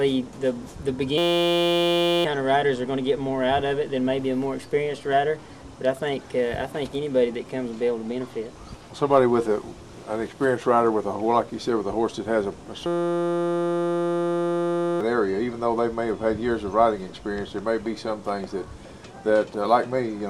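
At 1.18 to 2.25 s, and again at 12.86 to 15.01 s, the audio freezes into a system hang loop. The hardware kept replaying one 5.8 ms buffer, which fits a 256-sample ring buffer, while the system stalled. The result is a steady 172 Hz buzz, with roughly one second and then two seconds of audio lost. A waveform shows one identical cycle tiled end to end, and a spectrogram shows flat harmonic lines spaced 172 Hz apart.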